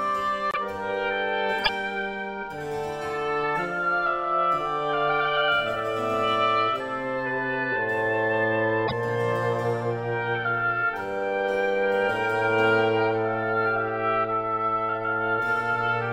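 At 0.51 to 0.57 s, 1.63 to 1.69 s and 8.87 to 8.93 s the audio jumps forward, and each jump carries a brief glitch about 60 ms long, roughly two 26.1 ms frames. The likely cause is a broken MP3 bit reservoir. Frames went missing, so the frames after each gap looked back for data they had stored earlier and decoded bytes belonging to a different frame.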